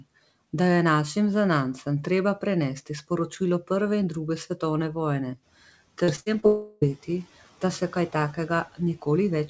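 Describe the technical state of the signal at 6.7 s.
At 6.7 s the speech sits inside a long network dropout, which runs from 6.46 to 6.84 s. About 0.36 s of audio never reached the receiver. The receiver covered the hole by stretching the last sound it had, for about 0.35 s. So the gap never drops to true silence. You hear a buzzy, smeared tail that fades away. Then speech resumes with that stretch missing. A network interruption is the likely cause.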